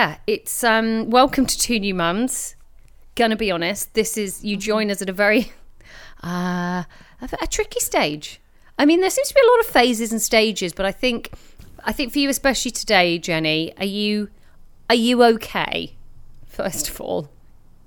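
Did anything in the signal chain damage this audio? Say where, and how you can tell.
No, none of the stages between capture and playback left any audible damage on this speech recording, and the signal stays intact throughout.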